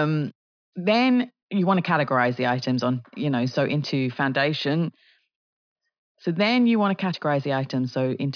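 No technical faults to report anywhere in the recording.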